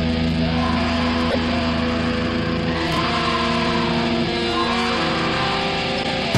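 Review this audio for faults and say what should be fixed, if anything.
A corrupt frame decoded causes a squeaky blip at 1.30–1.38 s, spanning roughly three frames and peaking near -5 dBFS, and a longer one at 5.96–6.10 s, roughly five frames, around -10 dBFS. Damaged frame data was played anyway, so energy lands at wrong frequencies. It is a short, self-contained chirp rather than a train of clicks. Adding checksums with error concealment would replace bad frames instead of decoding them.

Processor overload crackle appears at 2.88–3.03 s as gritty tearing: about fifteen buffer deadlines missed in a row, each skipped outright, which fits buffers of around 10 ms. Unlike a corrupt frame, it chops the existing sound with hard-edged gaps instead of adding stray tones. Larger buffers or lighter processing load would stop it.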